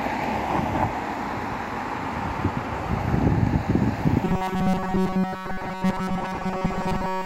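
From 4.25 s until 7.26 s, the sounds collapse into a rigid, metallic buzz at 188 Hz. This is robotic sound from repeated short buffers. Audio likely arrived too seldom, so a slice of about 5.3 ms loops through most of that span.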